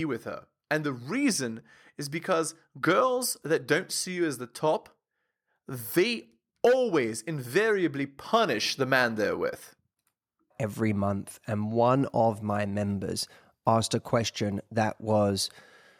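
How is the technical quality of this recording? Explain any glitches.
Nothing to flag here, as the speech comes across without any glitches worth explaining.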